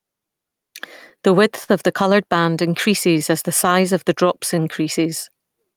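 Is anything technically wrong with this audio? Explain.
Yes, this speech clip has four technical problems.

Gain pumping runs through the whole clip. The level is pulled down on each loud syllable, a swing of about 5 dB. The likely cause is input gain set far too high, with a fast limiter or compressor clamping down on every peak. Unlike plain steady compression, the level breathes: loud and soft passages sit unnaturally close together.

Clock drift between sender and receiver is also present throughout. The sending device's clock runs roughly 4 percent slow relative to the receiver. Because audio arrives slightly slower than it is played out, the receiver's jitter buffer keeps draining and has to be topped up. What gives this away, rather than random network trouble, is that the resulting hiccups recur through the whole clip at uneven intervals and always push in the same direction.

Those repeated timing corrections run from 0.20 s to 5.64 s. 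To keep pace with the slow sender, the receiver repeatedly inserts small slivers of sound, so playback runs at about 98 percent speed and the clip stretches by around 150 ms in total. Each edit is tiny, so if heard at all it comes across as a faintly unsteady tempo or slight stutter. A single dropout would cut sound; these all add it.

A short stall from a late packet occurs from 1.64 s to 1.70 s. One packet missed its playout deadline, the buffer ran empty, and the receiver held the last sound for 43 ms until the packet arrived, then carried on from the same point. Nothing is lost, which separates it from a dropout or concealment gap. Instead, a sound is drawn out too long, with a slight buzz or dip, and everything after it shifts 43 ms later.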